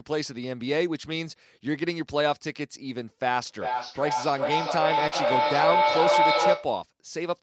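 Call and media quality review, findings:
Feedback echo between two devices, 3.47 to 6.79 s: the sound comes back roughly every 0.4 s and builds up to about 4 dB over the direct signal. Two devices in the room are looping, and neither echo canceller sees the other's playback.

Short concealed packet loss at 5.07 to 5.14 s: a brief smear where about 40 ms never arrived. The decoder stretched the preceding sound to fill the hole.

Lost packet rebuilt from error correction, 5.12 to 5.38 s: about 140 ms sounds rougher and noisier with no gap. Several packets were lost and the decoder played the low-bitrate Opus in-band FEC copies instead.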